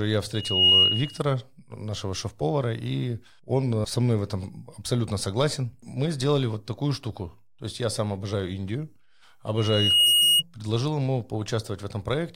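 At 0.34 s a loudspeaker feedback squeal appears: a single tone near 2.9 kHz that swells over roughly a third of a second to sit about 10 dB above the speech, lasting until 1.22 s. The same tone returns from 9.57 to 10.43 s, building more slowly, over about half a second. The microphone is picking up its own loudspeaker, and at 2.9 kHz the loop gain exceeds one, so that frequency feeds on itself until the loop is broken.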